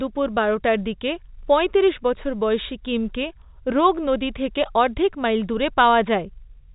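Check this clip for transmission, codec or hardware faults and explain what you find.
Nothing stood out on listening to this speech clip, which has the telephone-band sound of G.711 coding with nothing heard above about 3.8 kHz.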